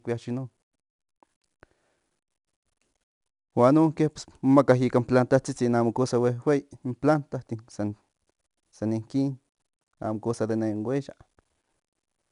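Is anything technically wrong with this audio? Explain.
Yes. The speech carries 4-bit ADPCM compression throughout. Each sample is coded as a 4-bit step from a predicted value, with an adapting step size, so the coding error is a broadband noise that rises and falls with the signal. Here it is plainly audible as a gritty hiss riding on every loud syllable. Nothing is present above 10.7 kHz, which fits a sample rate near 22 kHz and a bitrate around 89 kbps.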